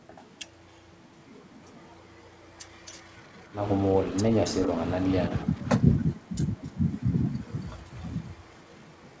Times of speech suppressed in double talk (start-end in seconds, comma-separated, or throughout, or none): 5.45-6.34